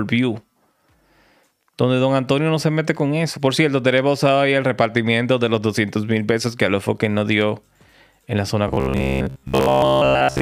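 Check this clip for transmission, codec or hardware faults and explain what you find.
One fault shows up near the end. From 8.68 to 10.41 s the sound turns into robotic sound from repeated short buffers. A rigid, metallic buzz at 66.7 Hz sets in, while the underlying sound still shows through roughly. The likely cause is audio arriving too seldom. The playback side fills each gap by looping the last fragment of about 15 ms, which sets the buzz pitch. Most of the real audio in this stretch is skipped, not delayed.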